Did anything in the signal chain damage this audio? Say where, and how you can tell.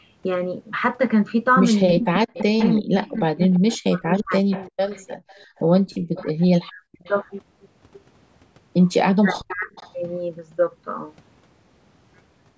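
Yes, and it all happened in the call processing, around the echo canceller.

Speech suppressed in double talk: the voice dips and cuts out in pieces between 1.97 and 4.92 s, losing about a second and a half in total, with drops as deep as about 40 dB. Shorter bites follow at 6.38 to 6.81 s (about 30 dB) and 9.23 to 9.69 s (about 35 dB). The likely cause is the canceller failing to tell the local talker from loudspeaker echo while both ends were talking, so it clamped down on everything.

Echo leak: from 2.34 to 7.17 s there's a faint delayed copy of the voice trailing by 340 ms, sitting roughly 20 dB under the speech. It returns at 9.5 to 9.93 s, 346 ms behind and a bit quieter, around 25 dB down. That steady delay and low level point to the far end's canceller likely letting part of its loudspeaker pickup slip back into its microphone.

Background gated by the echo canceller: between 5.2 and 6.1 s the room sound briefly drops away, about 40 dB at its deepest, for a couple of hundred milliseconds in total, then comes back. 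That's the canceller slamming the mic down while the loudspeaker was active and releasing once it eased off. The bandwidth topping out at 8 kHz is just the normal call mic chain.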